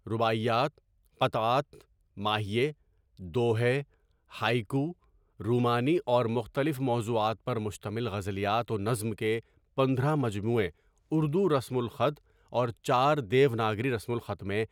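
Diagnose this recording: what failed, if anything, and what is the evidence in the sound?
Nothing in the speech stood out as faulty on listening, and none of the stages in the chain left any audible trace of failure.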